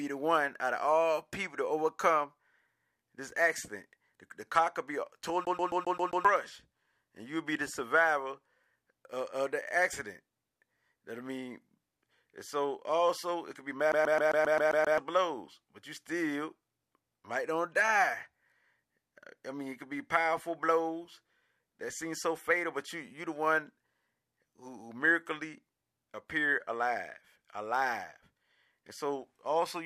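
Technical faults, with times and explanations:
5.45–6.25 s and 13.92–14.98 s, CD stuck on one turn: a scratch keeps throwing the laser back a track, so the same 0.13 s slice plays six times after "the car could be", then eight times after "also it could be" before "blows but you still", each jump leaving a brief mute that produces a fast, even stutter.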